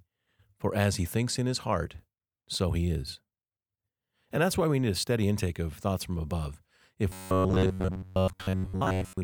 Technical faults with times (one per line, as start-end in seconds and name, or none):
7.10-9.23 robotic sound from repeated short buffers